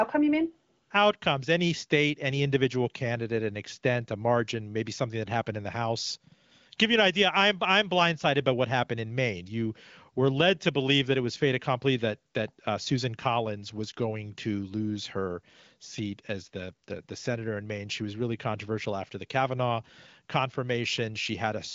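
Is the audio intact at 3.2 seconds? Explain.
Yes, the audio is intact at 3.2 seconds, with no fault at that moment.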